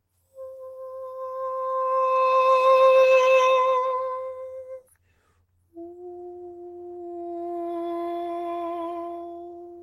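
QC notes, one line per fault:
No faults were found in this music clip. Nothing needs logging.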